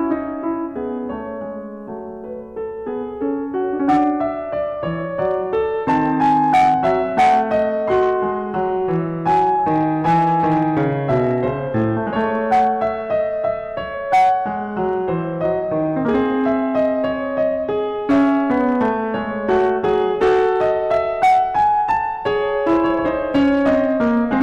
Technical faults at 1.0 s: hard clipping

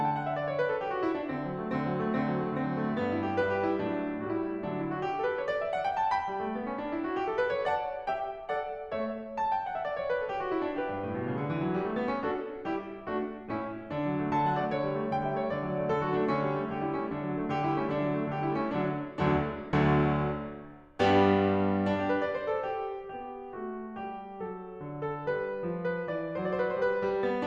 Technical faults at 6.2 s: none

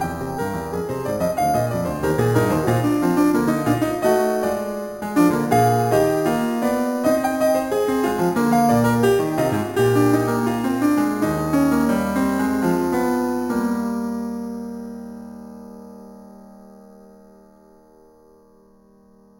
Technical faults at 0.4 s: imaging from sample-and-hold upsampling

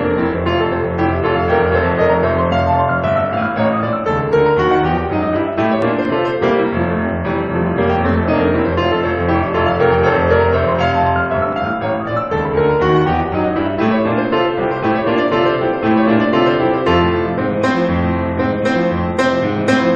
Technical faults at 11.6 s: CD scratch ticks

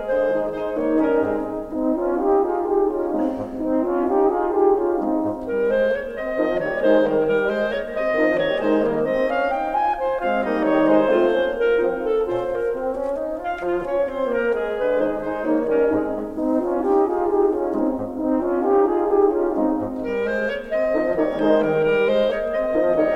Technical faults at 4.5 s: none

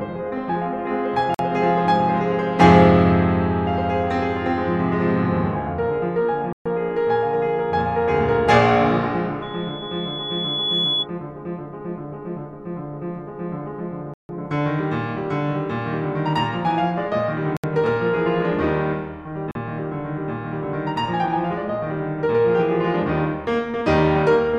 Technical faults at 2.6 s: none

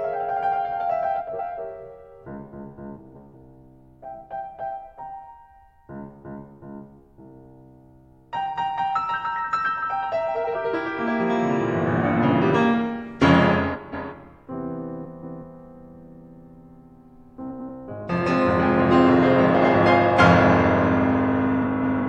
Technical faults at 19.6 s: frames out of order

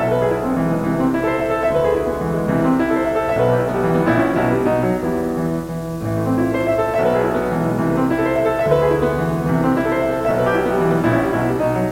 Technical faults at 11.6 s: video or display buzz

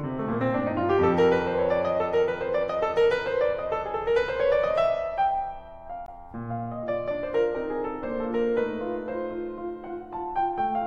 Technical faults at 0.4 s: none

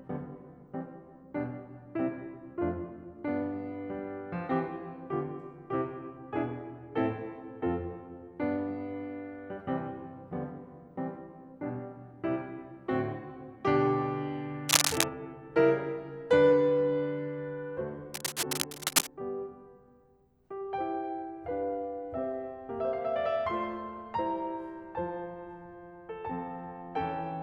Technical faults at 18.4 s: cable scratch noise

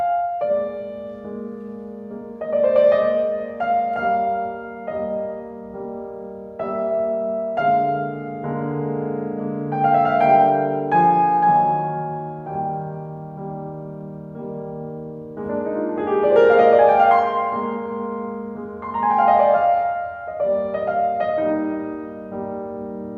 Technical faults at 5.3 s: none

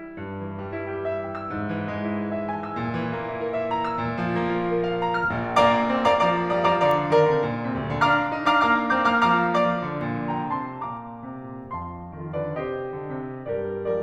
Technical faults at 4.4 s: none

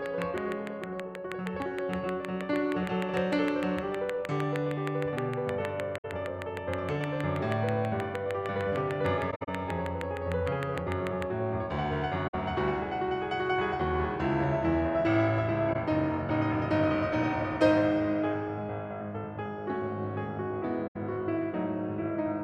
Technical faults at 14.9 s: none

